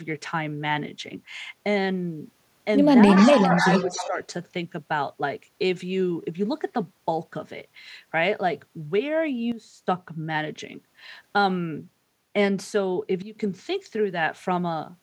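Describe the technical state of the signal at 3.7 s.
A copy of the speech trails about 0.29 s behind, roughly 10 dB down, from 3.13 to 4.08 s. This echo leak is likely from a far-end echo canceller missing loudspeaker pickup. From 3.61 to 4.19 s the speech also dips and breaks up in pieces, losing around 10 dB for about 0.4 s in total. This is speech suppressed in double talk, likely an echo canceller attenuating the talker while both sides overlap.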